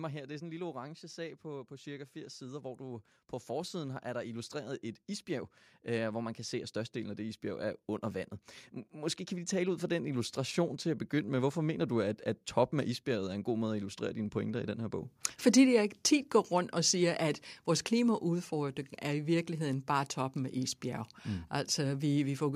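From 0.05 s to 1.31 s there is automatic gain falling. The speech opens loud, then sinks by about 4 dB over just over a second. The automatic gain control judged the input too loud, or its background noise too strong, and pulled its gain down step by step. The background sinks with the voice, which gives it away. A natural change in speaking level would leave the room sound steady.

At 1.42 s the opposite begins: automatic gain rising. Now the control judged the input too quiet and lifted its gain slowly. The rise runs until 7.93 s and adds about 11 dB. Voice and background swell together over more than six seconds. The noise floor climbs audibly along with the speech, so the growth is plainly in the gain stage, not in the talker.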